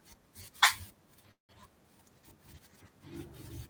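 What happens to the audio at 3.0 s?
At 3.0 s the audio runs on intact, with no dropout, click, distortion or other fault.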